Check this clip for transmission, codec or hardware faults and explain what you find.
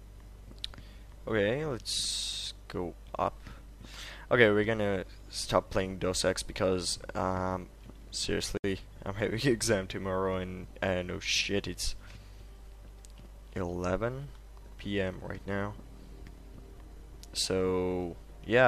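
One fault turns up. From 8.57 to 8.64 s there's a gap at a join of encoded pieces: two separately encoded sections were spliced without trimming the encoder's start delay and end padding, so a gap of about 66 ms breaks continuous sound, its edges smeared so the silent part is shorter, before it carries on where it stopped.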